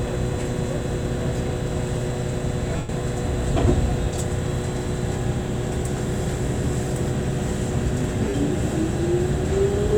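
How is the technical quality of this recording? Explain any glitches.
Two brief dropouts, where the sound turns into a hazy, noisy smear and thins away, come from lost LE Audio frames: at 2.76 to 2.89 s (130 ms) and at 8.29 to 8.34 s (50 ms). Those lengths fit runs of 10 ms frames going missing over the Bluetooth link. The LC3 decoder filled each gap by replaying the last spectrum with scrambled signs, fading it as the gap went on. The light lossy compression on the rest of the recording does only slight damage.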